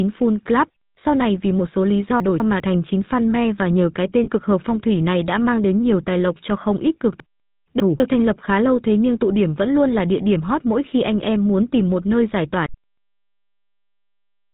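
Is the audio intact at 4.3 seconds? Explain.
No. From 4.24 to 4.30 s, between "và nhờ cái" and "cực hợp phong thủy", a lost GSM frame is concealed by repeating the last good frame. It sounds like a brief metallic ring, and a spectrogram shows a smeared, repeated band pattern. The GSM full-rate codec also runs throughout, giving a buzzy roughness with nothing above 4 kHz, which shows as an empty spectrogram above that line.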